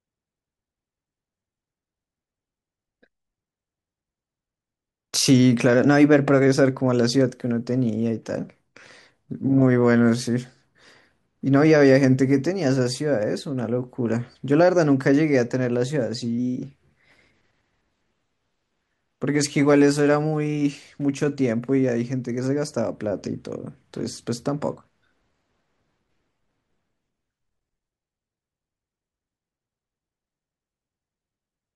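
At 5.75 to 6.47 s and again at 16.38 to 17.36 s, the speech briefly runs about 5.9% fast. Pitch rises nearly 99 cents, close to a semitone. This is likely a drift correction step, where clock-matching software jumped the playback rate to rebalance its buffer.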